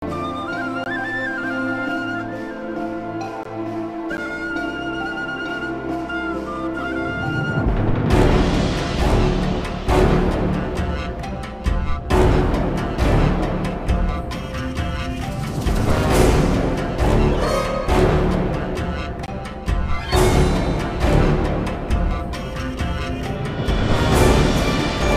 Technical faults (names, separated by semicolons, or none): block of digital silence